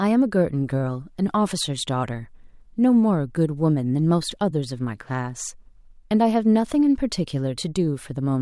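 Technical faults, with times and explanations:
No technical faults can be heard, so there are no times or explanations to give.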